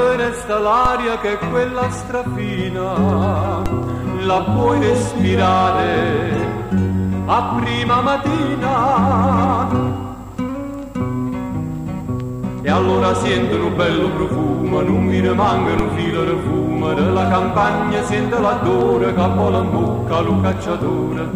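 Three DC steps occur, at 0.85 s, 3.66 s and 15.79 s, each a sudden shift of the waveform's zero line of about -7 dBFS that is heard as a low thump while the audio itself carries on unaffected. After each jump the offset drains away as a 20 Hz high-pass response would, so it decays rather than holding as a sustained shift. This points to a converter recalibrating or an offset-bearing input being switched into the path.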